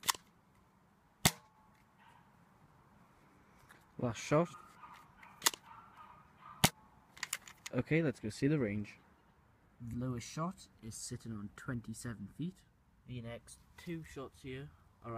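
At 4.53 s, 6.69–6.71 s and 9.92–9.94 s, compressed frames are skipped: the audio jumps ahead about a fifth, a fifth, then a tenth of a second.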